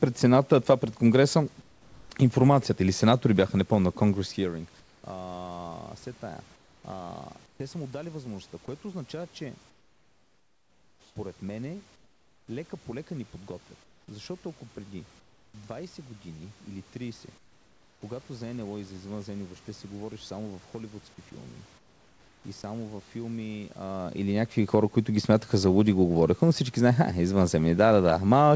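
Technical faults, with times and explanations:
1.62–2.10 s, 4.80–5.04 s, 6.56–7.60 s, 9.70–12.48 s, 13.84–15.54 s (after "лека по лека ни"), 17.38–18.02 s, 21.78–22.64 s (after "само в холивудски филми"): comfort noise in place of the background. In these speech pauses the real room background gives way to a flat, featureless hiss, about 5 dB quieter at the first two and about 8 dB at 17.38 s. The likely cause is discontinuous transmission: the sender stops sending during pauses, and the receiver synthesises noise shaped to match the background.
22.62 s: sound dropped by the voice detector. Right before "във филми а или", about 10 ms of the speech onset is missing, with comfort noise standing in briefly. The detector likely triggered a fraction late and treated the start of the sound as background, so transmission resumed just after the speech began.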